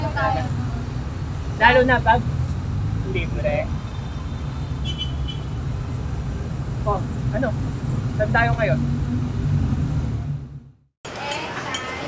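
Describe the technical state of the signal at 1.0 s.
Around 1.0 s the signal is intact, with no fault present.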